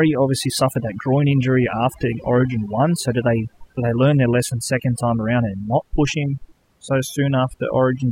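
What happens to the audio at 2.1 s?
At 2.1 s the overdone noise removal running through the whole clip is audible: heavy band-by-band suppression leaves near silence with twinkling specks, and quiet parts of the speech are cut away with the noise.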